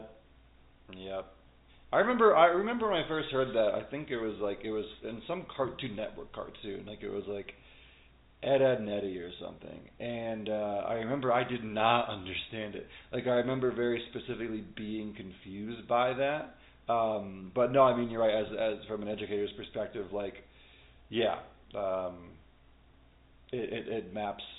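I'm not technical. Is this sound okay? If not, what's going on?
Yes, no faults to report.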